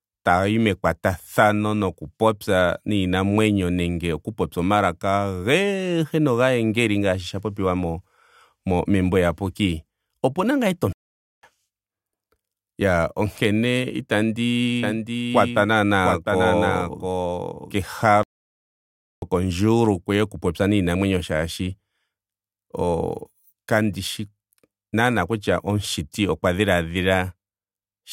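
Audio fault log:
10.93–11.43 s and 18.23–19.22 s, playback stall: the speech stops dead for about 0.5 s and then about 1 s before resuming. The player was likely starved of data or blocked. On the waveform these appear as flat silent gaps, and on the spectrogram as empty vertical bands with hard edges.
14.83–17.77 s, doubled audio track: a second full-band copy of the speech runs around 0.7 s behind, about 5 dB quieter, with no reverb tail, and it begins and ends abruptly. This is likely from a duplicate capture path or misaligned edit. The spectrogram shows the speech patterns repeated, shifted right.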